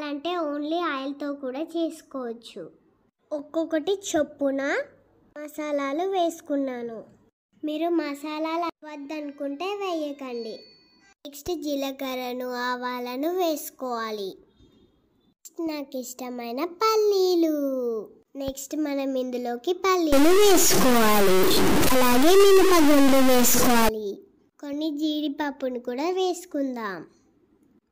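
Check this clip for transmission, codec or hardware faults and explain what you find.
One fault is audible: a stuck bit, from 20.13 s to 23.89 s. The sound turns harsh and buzzy for that stretch. The likely cause is a single data bit held at a fixed value, from a broken data line or converter. Roughly half the samples are pushed off by that bit's weight, an error of about -15 dBFS. Quiet moments fill with a noisy rasp, because small values flip sign.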